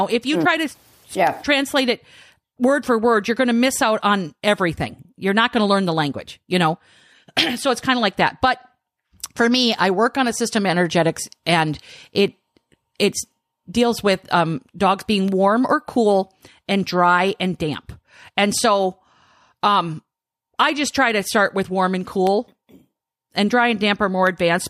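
From 0.27 s to 24.27 s, periodic USB or driver dropouts occur once every second. Each time, something stalls the audio path and a tiny fraction of a millisecond of speech is replaced by silence. The gaps sound like evenly spaced ticks.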